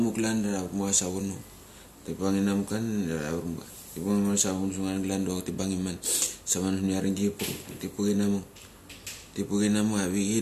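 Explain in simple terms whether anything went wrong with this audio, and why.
Listening to the speech here, nothing stood out as having gone wrong with the audio.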